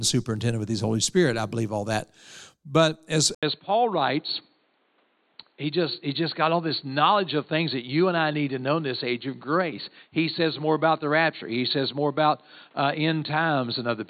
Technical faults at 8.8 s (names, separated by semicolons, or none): input switched to a poorer device